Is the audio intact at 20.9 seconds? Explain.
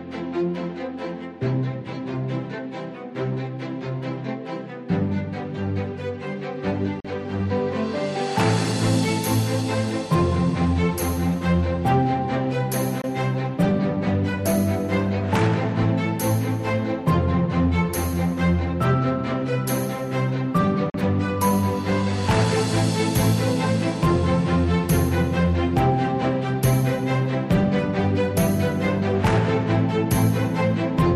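No. From 20.90 to 20.94 s the sound cuts to silence for about 40 ms, a likely Bluetooth dropout, consistent with two packets arriving too late. Unlike a stall, playback resumes further along, as if it had kept running through the gap.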